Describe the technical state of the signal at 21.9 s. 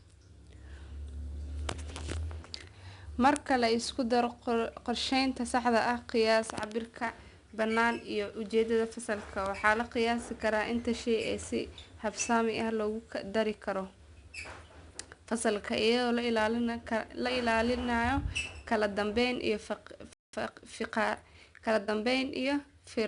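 At 21.9 s the speech is in a time-compressed catch-up that runs from 20.33 s to 22.31 s. After a stall, the player clears its backlog by cutting out small pieces and cross-fading across the gaps. Delivery runs about 1.1 times faster, but the pitch does not rise, which sets it apart from a plain speed-up.

Underneath lies 4-bit ADPCM compression, present throughout, with nothing above 10.6 kHz. Each sample is coded as a coarse step from a prediction, so a gritty broadband hiss rides on every loud syllable and sharp onsets grate. That level-following hiss, rather than the swirling or watery artefacts of a transform codec, identifies it. The data rate points to something near 89 kbps.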